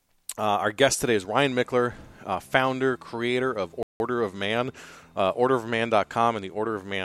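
Right after "uh founder creator of", at 3.83 s, there's a playback stall: the speech cuts to silence for about 170 ms, likely the player running dry on data.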